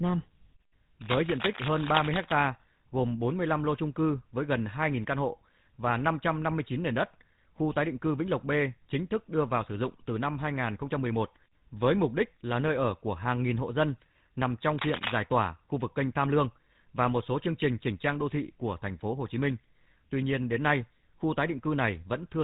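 Across the whole of this speech clip the voice has a buzzy, gravelly roughness with nothing above 4 kHz. That is the GSM full-rate codec, modelling the vocal tract and driving it with a sparse pulse excitation, which fits a 13 kbps stream and is plainly audible here.

A faint hiss rides on the louder and brighter parts of the speech and disappears in the gaps. This is sample clock jitter: the converter's timing wanders by under a microsecond, so steep waveform slopes are sampled slightly wrong, leaving an error far below the speech.

From 1.01 to 2.33 s a dense, uneven scratching sits over the speech, nearly as loud as the voice itself. It returns from 14.79 to 15.22 s, now about as loud as the speech. This is cable scratch noise, likely from a worn cable or connector being moved so its contact resistance jumps about rapidly.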